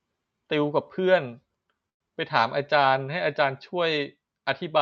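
At 1.89 s the speech stops and a call audio freeze takes its place until 2.02 s. The last sound is stretched into a brief fading buzz that settles into about 100 ms of silence, roughly 110 ms of filler in all. Nothing is lost: the speech resumes exactly where it broke off, now running that much later. The likely cause is packets held up in transit, leaving the jitter buffer empty until they arrived. Throughout, the audio stops near 8 kHz, consistent with a wideband call codec.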